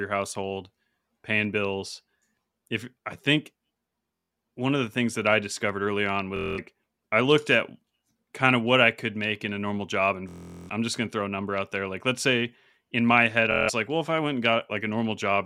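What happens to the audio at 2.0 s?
Nothing goes wrong at 2.0 s; the speech runs on intact through that moment with no audible fault.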